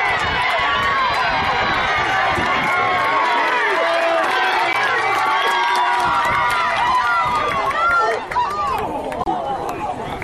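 At 4.73 to 4.76 s there's a short, loud blip, and at 9.20 to 9.28 s a longer, quieter squeaky burst. Both are a corrupt frame decoded: damaged compressed data got played anyway, spraying energy at wrong frequencies, roughly two frames' worth, then five.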